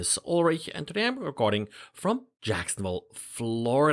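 No audible technical faults occur anywhere in the recording.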